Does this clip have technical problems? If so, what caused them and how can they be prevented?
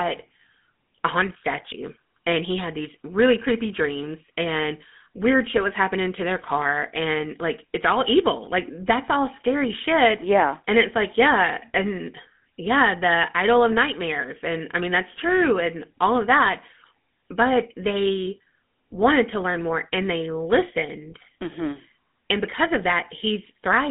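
Yes. Throughout, the speech sounds buzzy and gravelly, and thin, with nothing above 3.8 kHz. This is GSM full-rate codec damage: it rebuilds the voice from a vocal-tract model driven by coarse pulses, which fits 13 kbps. Prevent it by using a wideband codec such as AMR-WB or Opus.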